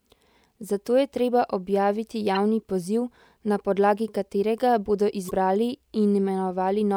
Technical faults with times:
2.35-2.37 damaged data in a compressed stream
5.27-5.31 damaged data in a compressed stream

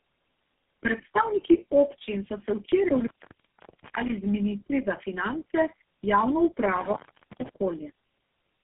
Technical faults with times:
0.00-8.64 tandem speech coding

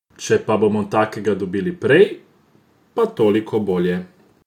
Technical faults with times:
2.03-4.47 sample clock jitter

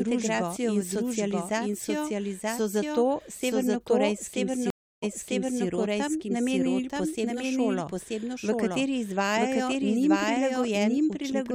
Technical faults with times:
0.00-11.54 doubled audio track
4.70-5.65 stream reconnect

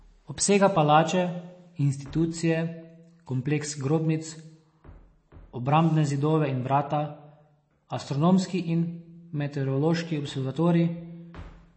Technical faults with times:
0.00-11.77 MP3 compression

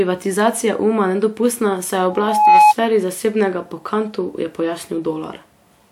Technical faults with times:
2.10-2.74 loudspeaker feedback squeal

